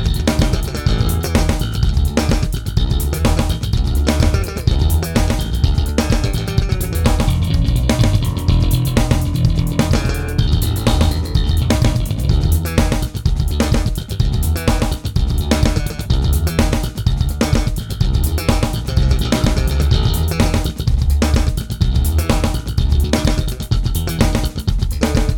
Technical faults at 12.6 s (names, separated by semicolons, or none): doubled audio track